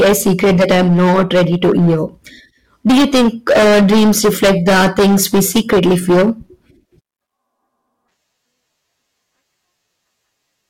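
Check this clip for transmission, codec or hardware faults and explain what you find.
One fault is present, and it runs through the whole clip: hard clipping. The speech is driven about 15 dB past what the signal chain can pass. Around one sample in seven hits the ceiling. At those moments the waveform peaks are sliced flat. Those square edges generate harmonics high up the spectrum that were never in the original sound. Because the overload is this heavy, every loud syllable carries a harsh, buzzing fuzz rather than occasional crackle.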